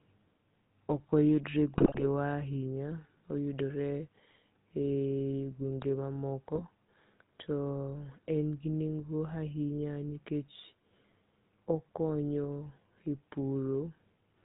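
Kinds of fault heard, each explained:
GSM full-rate codec: The speech runs through the original GSM full-rate codec for the whole clip, which fits a 13 kbps stream. This codec models the vocal tract as a filter. It then drives that filter with regular pulses, keeping only every third excitation sample. Nothing above 4 kHz gets through. Here the damage is plainly audible. The speech sounds buzzy and gravelly throughout, and the top end is dull.
GSM bit errors: Two short bursts of GSM bit errors break the speech, from 1.78 to 2.04 s and from 6.55 to 6.63 s. Flipped bits corrupt the decoder's filter, pitch or gain values. Each hit frame then has a bent spectrum or a sudden level jump. The first burst is longer and harsher, with squawks, pops and gargling. The second is brief. Both fit a few percent of bits flipped.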